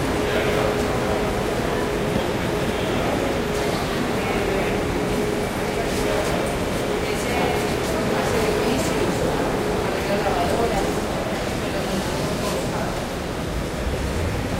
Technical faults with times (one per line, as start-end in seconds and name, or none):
0.00-14.60 sample clock jitter